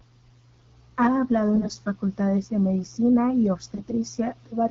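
From 1.54 to 1.70 s, just before "facultades de medicina y", and again from 3.74 to 3.92 s, right after "facultades de medicina y", AMR bit errors hit the speech. Several percent of the weakly protected bits in each frame arrived flipped, so excitation pulses landed in the wrong places and the fine pitch, gain and spectral values drifted. The voice keeps its rough pitch and level but turns hoarse, scratchy and gargly. On a spectrogram, harmonics smear into noisy broadband texture, and the waveform's periodic cycles become ragged.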